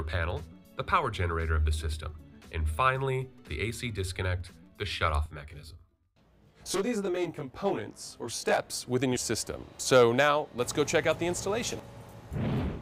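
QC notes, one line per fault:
5.26–8.59 s: channel delay (comb filtering). One channel lags by around 20 ms; the mono sum cancels at regular intervals from about 30 Hz, giving a rough, slightly doubled sound.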